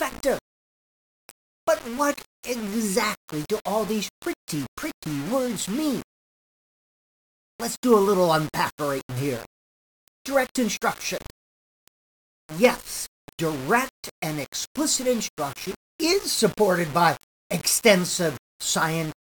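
Grainy distortion that follows the sound runs throughout, harshest in quiet passages and roughly 20 dB below the sound: likely low bit depth without dither, consistent with 5-bit rounding.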